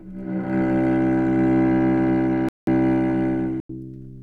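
A recording of everyday sounds drops abruptly into silence at 2.49–2.67 s and 3.60–3.69 s. These are corrupt frame muted faults: the decoder rejected damaged compressed frames, and the player substituted silence while keeping timing.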